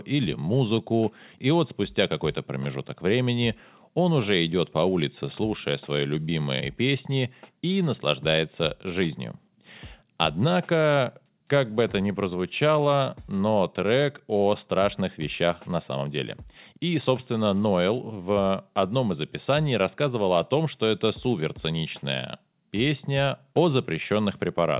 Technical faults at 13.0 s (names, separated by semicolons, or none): jitter buffer slow-down